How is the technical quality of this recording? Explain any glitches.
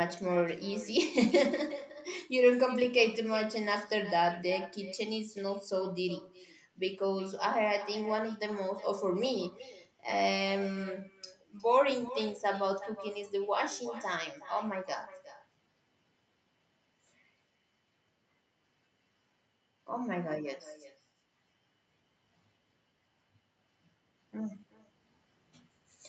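The recording has one persistent fault, an echo that runs through the whole clip. The speech is band-limited to 8 kHz, as expected on a call.

Echo with no canceller, throughout: the far end played the call over a loudspeaker, its microphone caught it, and nothing removed it. The speech returns after the network round trip, roughly 0.4 s later and about 15 dB quieter. It sounds like a thin shadow trailing every phrase.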